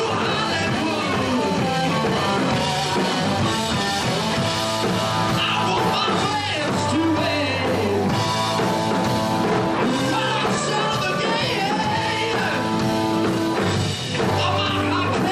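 No technical faults are audible.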